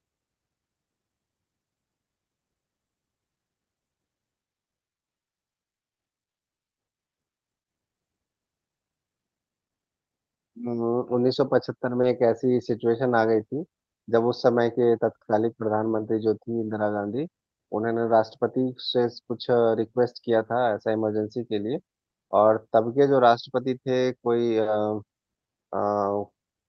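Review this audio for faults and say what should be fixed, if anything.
At 12.01 s a short concealed packet loss occurred. About 20 ms of the Opus stream never reached the decoder in time, so the receiver improvised that stretch by extending the preceding sound, carrying on its pitch where voiced or shaping noise where not, and then cross-faded back into real audio by 12.05 s. The result is a brief smear or wobble in the speech rather than a hard gap. Prevention: improve network stability or give the jitter buffer a little more headroom so late packets still arrive before playout.

Overlapping the end of that event, from 12.03 to 12.05 s, is a lost packet rebuilt from error correction. A 20 ms frame went missing, but the next packet carried a low-bitrate spare copy through Opus in-band forward error correction, and the decoder played that instead of leaving silence. That single 20 ms stretch therefore sounds rougher and grainier than the surrounding 32 kbps wideband audio, whose bandwidth reaches 8 kHz. 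Prevention: reduce packet loss on the link, or raise the FEC redundancy so recovered frames keep more detail.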